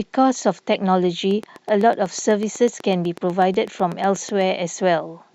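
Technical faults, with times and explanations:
0.74 s, corrupt frame decoded: a single damaged compressed frame was played despite flipped bits, so misread gains put energy at the wrong frequencies, peaking around -15 dBFS. It is brief, lasting about one frame. On a spectrogram it shows as a narrow, smeared vertical patch.
1.31 to 4.42 s, train of clicks: about thirty near-identical pulses at a steady 8.06 per second, peaking a few dB above the speech, likely from electrical interference or a faulty connection. It ticks through pauses too. A waveform shows evenly spaced spikes, and a spectrogram shows regular thin vertical lines.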